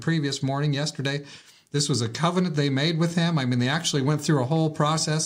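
No technical faults can be heard anywhere in the recording, and the signal holds steady throughout.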